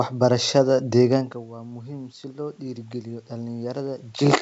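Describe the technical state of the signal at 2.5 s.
At 2.5 s the signal sits inside an automatic gain rising episode that runs from 1.46 to 4.37 s. After the input fell by about 15 dB, when the talker moved back from the microphone around 1 s, the gain control slowly added about 6 dB. Speech and room noise swell together. On the waveform the envelope climbs gradually, and on a spectrogram the noise floor between syllables brightens along with the voice.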